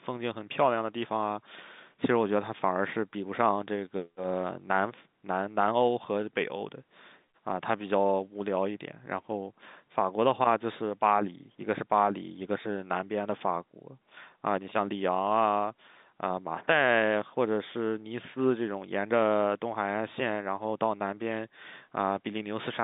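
Nothing goes wrong anywhere in this speech recording, which simply carries the ordinary telephone sound of G.711 A-law coding at 64 kbps, with the line band running from about 150 Hz to 3.7 kHz and nothing above about 3.8 kHz.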